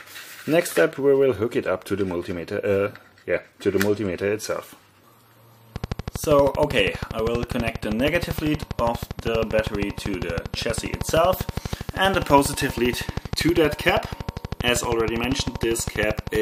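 From 5.76 s to 16.36 s a train of clicks ticks regularly at 12.6 per second, around 150 pulses about 10 dB above the sound. Each is a matching waveform spike and a thin vertical spectrogram line, likely from interference or a faulty connection or power supply.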